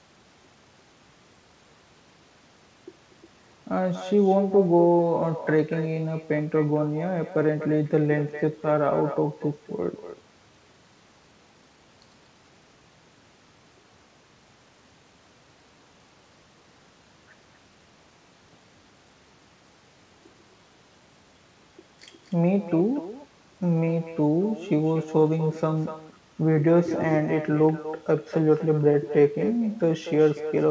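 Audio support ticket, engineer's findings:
Echo with no canceller, throughout: a discrete copy of each phrase about a fifth of a second later, about 12 dB down and thinner. Unlike room reverb, it's a separate repeat. Far-end speaker-to-mic loop; G.722 band ends at 8 kHz.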